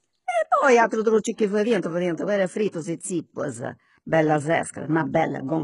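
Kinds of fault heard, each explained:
HE-AAC compression: The speech carries heavy codec damage throughout, with nothing at all above about 11.1 kHz. The treble has been rebuilt rather than kept, which is likely spectral band replication: lower bands get copied upward under a rough envelope, so the upper harmonics don't line up with the real ones. That's why the s sounds come across gritty and metallic, which fits a very low bitrate, around 12 kbps.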